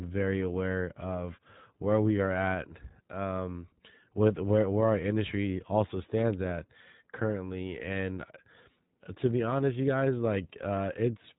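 From start to finish the iLBC codec holds speech below 3.8 kHz and codes each 20 ms frame independently, leaving a rough, synthetic edge that fits 15.2 kbps, unlike plain band-limiting.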